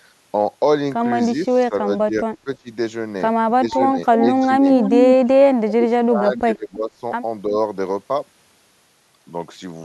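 From 1.47 to 2.69 s, and again from 3.57 to 4.66 s, the talker keeps ducking, by up to about 20 and then about 15 dB. That's speech suppressed in double talk, likely an echo canceller clamping down while both ends talk. Around 4.2 s and then 4.74 to 5.14 s an echo leak shows up: a copy of the voice 332 ms late, fairly loud, likely residue from a loudspeaker the canceller missed. The suppression comes back hardest from 5.32 to 7.02 s, dropping roughly 35 dB, with a small dip at 7.48 to 7.55 s.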